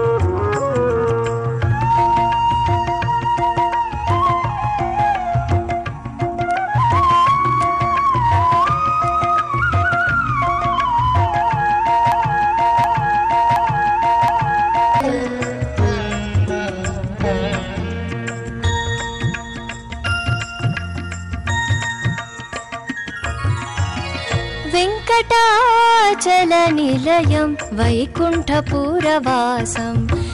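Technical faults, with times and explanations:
12.12–15.00 s broken-record loop: one 0.72 s fragment repeats four times, identical and unbroken rather than gapped like a dropout; likely a stalled stream resending held audio.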